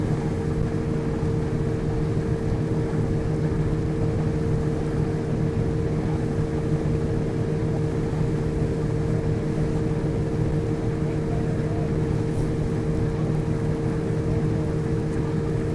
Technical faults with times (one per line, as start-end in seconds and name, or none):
12.60-15.75 resampler restarted on every block